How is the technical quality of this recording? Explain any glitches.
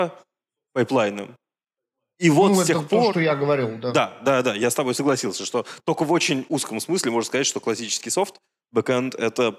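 Nothing goes wrong anywhere in this recording: no glitches turn up at any point, so there's nothing to explain.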